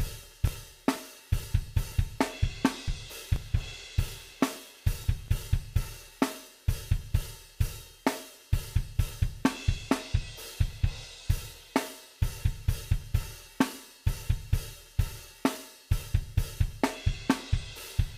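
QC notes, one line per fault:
0.24–5.52 s, periodic USB or driver dropouts: roughly 10 ms skipped every 0.24 s, heard as regular ticks; evenly spaced splice jumps in waveform, thin vertical broadband lines on spectrogram.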